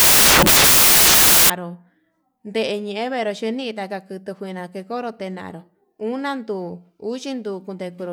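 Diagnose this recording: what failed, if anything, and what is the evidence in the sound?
The failure is at the sample-format conversion stage: from 0 to 1.5 s the samples are built from the wrong bytes, so the speech is buried under loud, hiss-like white noise. Misaligned or swapped bytes push the rapidly changing low-order bits into the high-order positions, making each value close to random. On a spectrogram this appears as dense, flat energy across the whole band, and the waveform is dense and loud.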